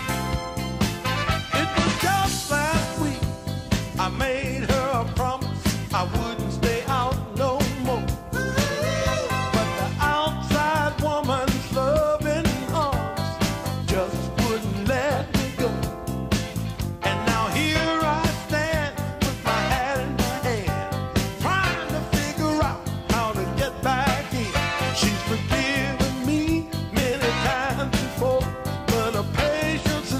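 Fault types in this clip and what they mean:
No technical faults can be heard anywhere in the recording: the signal stays continuous and steady, with no interruptions, level jumps or added noise.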